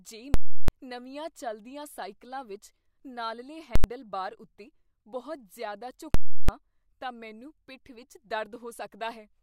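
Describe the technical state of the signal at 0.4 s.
At 0.4 s the signal is inside a burst of invalid numbers at full scale, running from 0.34 s to 0.68 s. That is about 0.34 s long, which fits a 16384-sample processing block. A calculation produced infinite or invalid values. These were clamped to the extreme positive or negative level, so the output holds flat at one extreme value, far beyond the speech peaks. You hear a very loud pop at each edge and no speech in between. The speech resumes with "ਨਵੀਆਂ ਚੱਲਦੀਆਂ".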